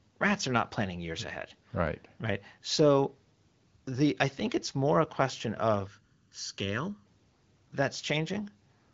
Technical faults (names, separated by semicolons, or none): channel delay (comb filtering)